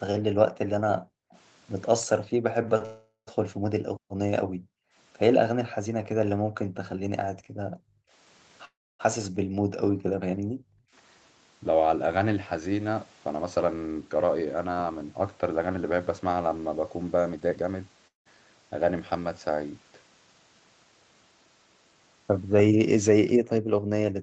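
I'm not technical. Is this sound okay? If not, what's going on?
No, there are a few problems.

Background gated by the echo canceller: from 0.25 to 10.9 s, the room sound behind the speech keeps dropping away, for about seven seconds in all. It happens again from 23.4 s to the end. The call's echo canceller is turning the microphone down hard while it hears the other side playing.

Echo leak: at 1.31 s, 6.85 s and 9.23 s there are brief, faint repeats of the speech, each arriving about 0.3 s late. This is likely the other side's loudspeaker being picked up by their microphone and sent back.

Call audio freeze: the speech stalls from 2.85 to 3.29 s, from 8.65 to 9.01 s, and from 18.07 to 18.28 s. Each stall fills with a fading hum or short silence, then the speech picks up where it stopped. Nothing is lost. Delayed network data is the likely cause.

Jitter buffer speed-up: from 13.3 to 16.0 s the speech runs about 12% fast, and from 17.3 to 17.8 s it runs about 68% fast. 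The pitch stays the same but it sounds rushed. Each time, the receiver snipped out about 0.3 s of audio to catch up after the delay.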